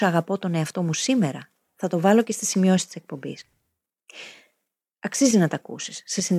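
Right after "και στη σημειώσεις της", from 3.39 to 3.65 s, there's processor overload crackle: dozens of missed deadlines on tiny buffers, around 5 ms each, leave skipped gaps that tear gritty through the speech.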